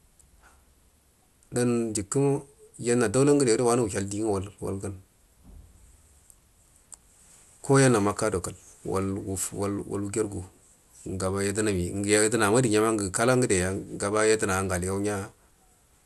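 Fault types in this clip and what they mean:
MP2 compression: The speech sounds dull, with nothing above about 12.1 kHz, and carries a plainly audible gurgling, granular roughness. This likely comes from MPEG Layer II coding at a low rate, which fits about 80 kbps. Starved sub-bands drop out or are coarsely quantised.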